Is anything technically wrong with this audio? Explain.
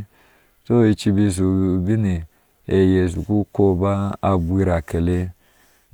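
No, nothing technically wrong can be heard here.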